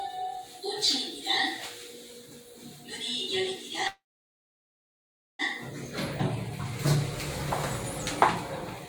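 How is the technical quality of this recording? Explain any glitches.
The recording has one clear glitch, a call audio freeze. From 3.87 to 5.42 s the sound stops and is held. A brief fading tail is followed by about 1.4 s of silence. The likely cause is delayed packets draining the jitter buffer. Playback then resumes where it stopped, with nothing lost, but everything after arrives about 1.5 s late.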